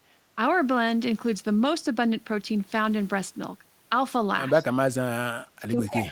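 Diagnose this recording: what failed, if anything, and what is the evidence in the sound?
Echo leak, in call processing. A faint copy of the speech returns about 160 ms late at 4.57 to 4.64 s and again at 5.84 to 5.91 s. It sits well below the direct sound. The likely cause is a far-end echo canceller failing to remove its loudspeaker's pickup.

Speech suppressed in double talk, also call processing. At 4.60 to 4.65 s the speech dips slightly. From 4.83 s to the end it falls almost to silence. This is likely the canceller confusing the talker with echo and attenuating both.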